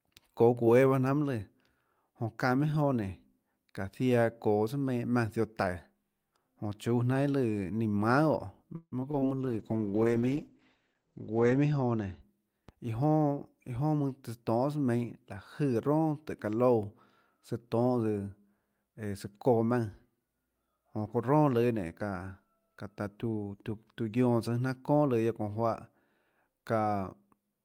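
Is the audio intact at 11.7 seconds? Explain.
No, a call bitrate drop runs from 9.42 to 12.27 s. The encoder's budget falls from 40 to 9 kbps, bottoming out for about 2.2 s, so it codes coarsely and trims the band from 20 kHz to 8 kHz, leaving the speech rough and muffled.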